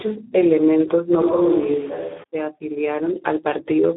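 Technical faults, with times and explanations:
Throughout: Speex codec. The speech sounds hoarse and grainy, with heavy codec damage from a low-rate CELP encoding that fits about 8 kbps. Too few bits go to the excitation. Combined with a line band of 250 Hz to 3.6 kHz, nothing remains above 3.8 kHz.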